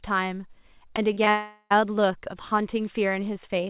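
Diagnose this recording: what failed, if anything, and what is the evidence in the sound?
Network stage, short concealed packet loss: brief smears at 0.96, 1.13 and 1.24 s, where gaps of 20 to 40 ms were patched by extending the preceding speech.

From 1.30 to 1.72 s the speech becomes a fading continuation of the last sound, goes briefly silent, then resumes further on. The likely cause is a long network dropout, with about 400 ms lost.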